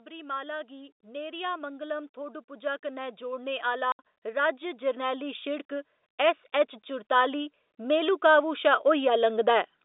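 From 0.05 to 6.32 s the automatic gain rising fault is at work. The gain control judged the incoming speech too quiet and kept raising its amplification, about 14 dB over roughly six seconds. Because the stage cannot tell voice from surroundings, the voice and the background climb together, so the clip slowly swells rather than jumping.

Inside that swell, from 3.92 to 3.99 s, comes packet loss filled with silence. Some 70 ms of audio never arrived, which fits seven 10 ms packets, and the receiver played nothing in their place. The result is a sharp hole in the speech with abrupt edges, heard over the narrow telephone band of the G.711 path.

From 6.89 to 9.73 s the automatic gain rising returns, this time lifting the level by about 6 dB, a gentler second swell that again brings the background up along with the voice.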